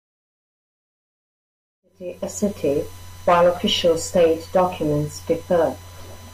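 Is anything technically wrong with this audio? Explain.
Yes, there is one fault. USB whine runs throughout the speech, a steady 1 kHz tone about 30 dB below the signal, from the bus's 1 ms current bursts leaking through power or ground. The fade-in ending at 2.71 s is intentional, and the whine persists beneath it.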